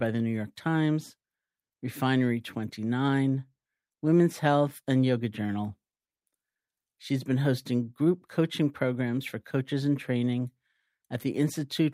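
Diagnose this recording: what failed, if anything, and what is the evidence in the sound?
No failure is audible anywhere in this recording.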